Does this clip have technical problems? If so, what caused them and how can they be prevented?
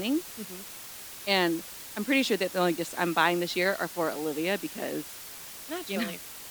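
Yes. Low bit depth with dither runs through the whole clip. The speech uses only 6 bits, with dither added before rounding. The rounding error becomes a constant, even hiss about 15 dB below the speech, with no distortion. Keep 16 bits or more through every processing and export stage.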